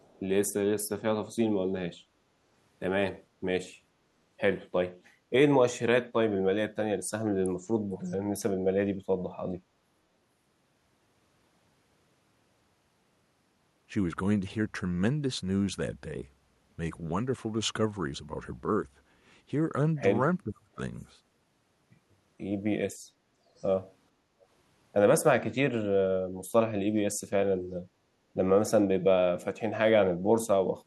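Speech recording with delayed copies of the talker, which points to an echo leak, likely from a loudspeaker endpoint whose echo canceller let residual pickup through. They trail the voice by about 0.45 s and appear at 0.0 to 0.19 s, 7.9 to 8.16 s, 21.0 to 21.04 s and 23.56 to 23.66 s. The one near 8 s is about 15 dB under the speech, while the others sit far lower. Between 20.44 and 20.79 s the talker's level collapses by roughly 30 dB for around 300 ms, consistent with speech suppressed in double talk, where the canceller attenuated the near-end voice while the far end was also active. From 24.18 to 24.4 s the room sound dips by about 6 dB for roughly a fifth of a second: background gated by the echo canceller, which clamped the microphone down during loudspeaker playback and then released it.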